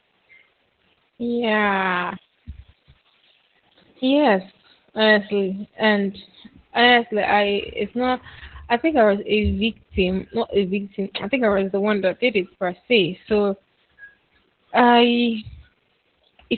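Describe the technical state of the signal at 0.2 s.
At 0.2 s the speech sounds muffled, hoarse and slightly robotic, as it does throughout: Opus voice compression in SILK mode is confining it to a 4 kHz narrowband, consistent with roughly 8 kbps.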